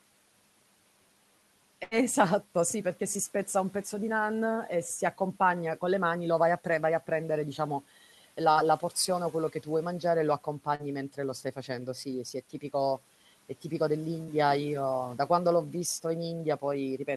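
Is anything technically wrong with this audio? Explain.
Yes, there are two dropouts in this speech. From 1.83 to 1.94 s, the sound holds as a fading buzz or hiss for about 78 ms, then jumps ahead with roughly 80 ms gone. This is a burst of packet loss: consecutive packets were lost or arrived too late, so the receiver stretched the last sound while lowering it, then resumed further on.

At 10.75 to 10.82 s there is a brief smear or wobble where a short sound can disappear. This short concealed packet loss left about a 40 ms hole that the decoder filled for about 41 ms by extending the preceding sound, then blended back in. The room noise underneath, about 26 dB below the speech, belongs to the recording itself.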